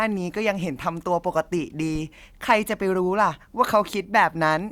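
At 1.95 to 2.01 s, a phantom power thump: a supply step through the coupling capacitors gives a deep, 13 ms-decaying thud, electrical rather than a breath pop or handling bump.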